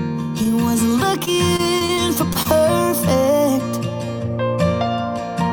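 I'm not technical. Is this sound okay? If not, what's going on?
No. There are two problems.

The first is a short stall from a late packet, from 0.43 to 0.50 s. The audio travels in small chunks called packets, and one arrived late, so the receiver's small waiting store ran empty. To cover the wait it held the last bit of sound for about 18 ms, then picked up exactly where it left off and trimmed about 5 ms to catch up. Nothing is lost, but there is a brief stretched moment, like a tiny hiccup.

The second and bigger problem is repeated packet loss (robotic sound), from 1.25 to 2.52 s. Here packets kept going missing or arriving too late, over and over. Each time, the receiver tried to hide the hole by stretching the sound before it, but the next hole came almost at once. Roughly 100 ms of real sound is gone across that stretch, and the longest single gap is about 26 ms. The patching makes the audio choppy, with pieces missing, for just over a second.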